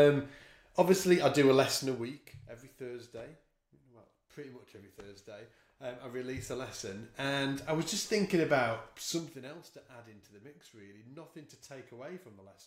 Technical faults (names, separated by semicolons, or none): zipper noise